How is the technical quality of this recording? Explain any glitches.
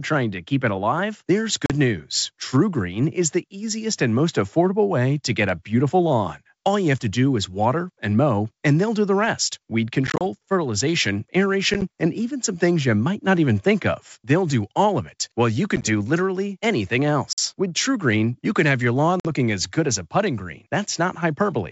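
The recording has six short dropouts. The wideband sound, clear up to about 7 kHz as G.722 coding carries it, frames them.

Packet loss on an ADPCM call occurs at 1.66–1.71 s after "keep it alive there's", 10.07–10.22 s after "do the rest weed", and at 11.74–11.83 s, 15.76–15.89 s, 17.33–17.39 s after "literally anything", and 19.20–19.31 s. Lost packets become silence, 40 ms at the first hole. The later events total 20–80 ms each, three of them scattered gaps. The decoder's predictor and step size then disagree with the sender's, so the sound resumes briefly distorted before settling.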